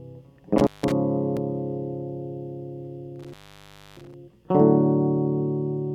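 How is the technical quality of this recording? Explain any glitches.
The music is marred by two dropouts from an intermittent contact. A loose cable or plug briefly loses connection, so the signal cuts out with crackle at each edge and faint hiss through the gap. This happens from 0.58 to 0.92 s, open for about 165 ms, and again from 3.16 to 4.14 s, open for about 634 ms.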